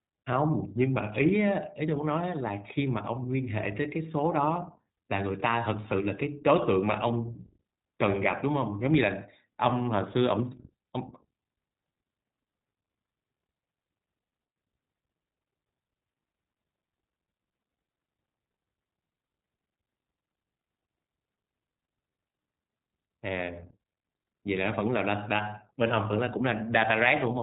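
Across the whole speech clip the sound is narrowband, cut off above 4 kHz, with a plainly audible rough, slightly synthetic quality. That points to the iLBC codec, which codes each frame's excitation independently, consistent with 20 ms frames at around 15.2 kbps.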